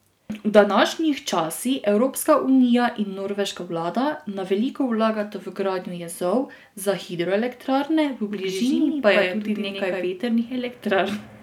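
From 8.31 to 10.07 s a doubled audio track appears: a second copy, a few dB quieter, trails by about a tenth of a second, likely from a slower capture path. Unlike an echo, it never decays and cuts in and out abruptly.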